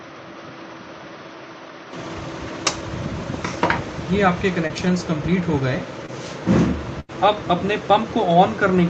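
Right from the start, the first 1.93 s sound duller and boxier, with nothing above about 6.2 kHz, a background noise sitting roughly 30 dB under the signal, and a level a few dB (around 5) lower. Then it opens up cleanly with no gap in between. That's most likely the input switched to a poorer device, a narrower-band mic or headset profile carrying its own tone and noise floor, before the better input took over.

There are two instances of short concealed packet loss, at 4.67 to 4.71 s and 6.06 to 6.10 s. In each, about 20 ms of audio never arrived and the receiver papered over it by extending what came just before. You hear a tiny smear or wobble rather than a clean dropout.

The bigger one is a burst of packet loss at 7.00 to 7.11 s. Roughly 80 ms went missing, and the concealment stretched the last sound for about 87 ms while fading it. You get a brief held buzz or dying hiss, and then the audio picks up further along with that stretch simply gone.

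All of this rides on an Opus call path, which is why the top end stops around 8 kHz once the better input is in use.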